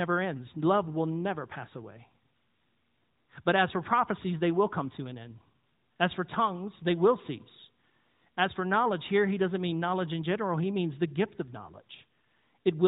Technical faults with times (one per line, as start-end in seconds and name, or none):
none